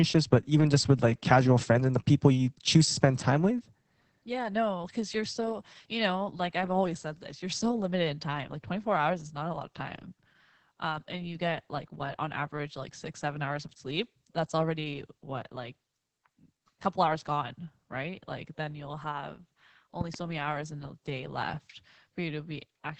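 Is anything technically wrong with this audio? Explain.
Yes. Opus voice compression runs through the whole clip: the linear-prediction voice coder is starved of bits, which fits a rate around 10 kbps, so the band stops near 8 kHz and the coarsely coded excitation leaves the speech muffled, hoarse and faintly robotic.

A loud pop lands between 20.01 and 20.17 s, just before "many hours in". Two sharp pops rise well above the speech, roughly 10 dB louder, while the speech continues underneath. The likely cause is a brief voltage step from a plug, switch, static or driver glitch.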